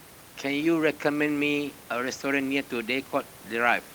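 The signal carries no technical faults, with only a background of room noise sitting about 20 dB below the speech, which belongs to the recording space rather than to the system.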